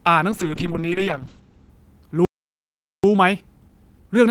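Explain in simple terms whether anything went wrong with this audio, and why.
From 0.33 to 1.75 s, a call bitrate drop hits the speech. The call's connection weakened, so the encoder had far fewer bits to describe the sound. The voice turns rough and muffled, with the crisp top end cut away, before clearing up.

At 2.25 s there is a playback stall. The speech simply stops and stays silent for about 0.79 s, until 3.04 s. The player likely ran out of audio data, or was briefly blocked, and had nothing to play.

From 3.04 s to the end, time-compressed catch-up follows. To make up the lost time, the player trims tiny slices and blends the gaps. The speech runs about 1.1 times faster at normal pitch, sounding slightly hurried.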